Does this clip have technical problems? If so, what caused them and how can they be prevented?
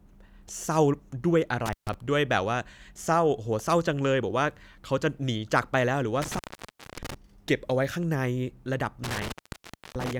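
Yes. Intermittent contact makes the speech drop out three times: from 1.66 to 1.94 s (open for about 139 ms), from 6.22 to 7.14 s (about 588 ms), and from 9.04 to 10.15 s (about 674 ms). A loose cable or plug briefly breaks the signal path, so the sound cuts away, crackles as the contact scrapes open and closed, and leaves faint hiss during each gap. Checking and firmly seating or replacing worn cables and connectors before recording prevents this.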